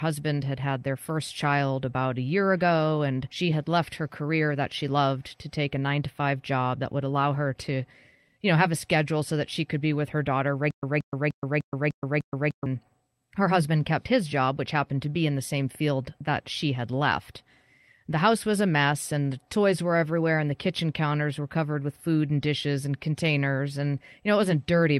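At about 3.31 s there's a skip ahead: roughly 0.4 s of speech simply isn't there, and the two sides are butted together with no filler, so it feels like a hard jump forward, as if late audio got thrown away while newer audio was queued.

Right after, from 3.45 to 6.86 s, the jitter buffer speed-up kicks in. It's trimming tiny pitch-period slices to drain the excess, running at about 107%, shaving around 200 ms in total. Pitch stays put, but the talker sounds rushed.

Then from 10.71 to 12.66 s comes a stutter with silent gaps. A roughly 177 ms fragment replays six times, each followed by about 124 ms of dead digital silence, a steady 300 ms cycle. It's likely a stalled stream retrying, and the speech that belonged there is gone.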